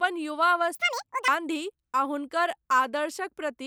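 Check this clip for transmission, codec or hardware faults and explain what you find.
One fault is present in this speech clip: a stretch of audio read two samples at a time (double speed), from 0.75 to 1.28 s. Over that half second the reader treats each pair of samples as a single frame, as if the stream were two-channel or used samples twice as wide. The speech plays at 2x speed and jumps a full octave, 12 semitones, higher.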